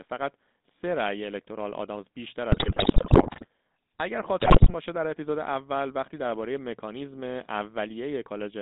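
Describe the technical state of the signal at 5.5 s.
At 5.5 s the speech has a buzzy, gravelly roughness, with a hollow, boxed-in tone and no air or sibilant sparkle above about 3.7 kHz, and nothing much below 200 Hz. This is GSM full-rate codec damage, present across the whole clip rather than at this moment alone. The coder models the vocal tract and drives it with a sparse, regularly spaced pulse excitation, which fits the 13 kbps full-rate scheme and produces that plainly audible grit.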